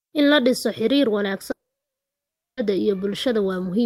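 Long network dropout from 1.51 to 2.59 s, after "la dhiso xiriir": a brief smeared tail, then silence, and the speech resumes without the portion likely never delivered.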